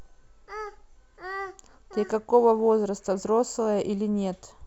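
Throughout the speech, sample clock jitter of a microsecond or two mistimes samples, adding hiss about 45 dB down that rises on loud, bright passages.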